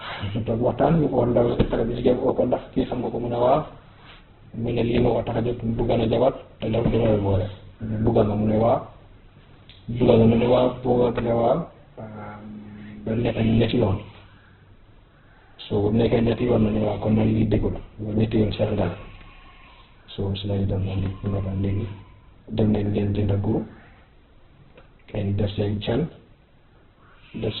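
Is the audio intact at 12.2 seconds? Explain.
No, at 12.2 seconds the speech is still carrying the same damage it has from start to finish, and it sounds like heavy Opus compression. Nothing reaches above about 4.2 kHz, so it's squeezed into a narrow band, and the sound comes out rough and grainy. That's the encoder starved of bits, keeping each band's energy but filling the detail with folded or noise-like content, which fits a very low bitrate around 8 kbps.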